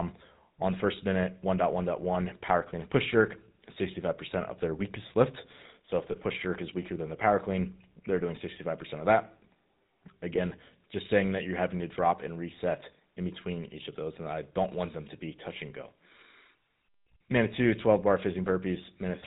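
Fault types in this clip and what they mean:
GSM full-rate codec: The whole clip passes through a vocal-tract model driven by sparse, regularly spaced pulses, so the speech has a plainly audible buzzy, gravelly roughness and nothing above 4 kHz. The damage level fits the 13 kbps full-rate coder.
lost GSM frames: From 6.12 to 6.16 s, just before "push jerk is weaker", the decoder holds the last good frame's settings, giving a brief rough, metallic ring. Its 20 ms length points to a single lost frame.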